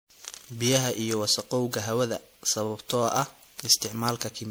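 Generation loss runs through the whole speech clip: it's swirly, smeared and hollow, with softened attacks. That's likely repeated lossy re-encoding, about five passes through MP3, each adding fresh quantisation on a shifted frame grid. Its character fits something near 96 kbit/s, but worse.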